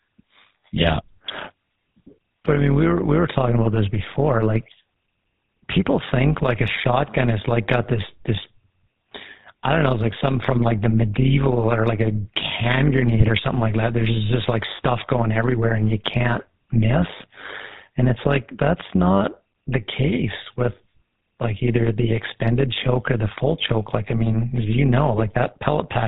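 A metallic buzz runs through the whole clip: the level pumps by about 11 dB roughly a hundred times a second. This is overlap-add ripple. The speech was split into windowed frames and rejoined with overlaps that don't sum to a steady gain, so each frame swells and dips.

Throughout, the voice is also buzzy and gravelly, with nothing above 4 kHz and plainly audible damage that fits the 13 kbps GSM full-rate codec. That codec rebuilds speech from a vocal-tract filter driven by sparse, regularly spaced pulses, which produces the grainy roughness.

Brief squawks and gargling pops break out at 6.43–6.48 s, 13.19–13.29 s and 25.18–25.24 s. These are GSM bit errors. Flipped bits corrupted the decoder's filter, pitch or gain values for a few frames, bending the spectrum or jolting the level.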